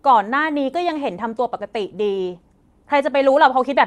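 At 1.1 s a call bitrate drop sets in and lasts to the end. The connection's bandwidth estimate fell, so the encoder went from 64 kbps to 24 kbps, holding the lowest rate for about 1.55 s. With fewer bits the speech is coded more coarsely and turns rough and watery, and the audio band shrinks from 20 kHz to 12 kHz. On a spectrogram, energy above 12 kHz disappears.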